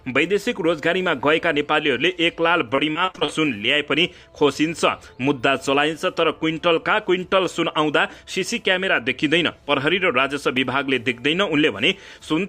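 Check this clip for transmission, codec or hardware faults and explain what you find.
Two transmission or playback faults can be heard.

From 2.75 to 3.30 s there is repeated packet loss, giving a robotic sound. Audio data arrived lost or late again and again. Each hole was bridged by extending the last stretch of sound, and the next hole came soon after. The pattern points to about seven lost packets, the longest gap 35 ms. About 165 ms of the 180 ms missing was patched. Concealment covers about 30% of the span, so it sounds choppy.

At 10.57 s there is a block of digital silence lasting 0.66 ms. A tiny run of samples dropped out, likely because the output buffer was not filled in time. The signal cuts to silence and back without any fade. At this length there is no audible hole. It is heard as a tick or dip.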